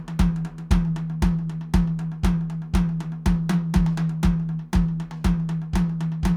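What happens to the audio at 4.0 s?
Nothing goes wrong at 4.0 s: the music plays through that moment intact, with no dropout, click or other fault.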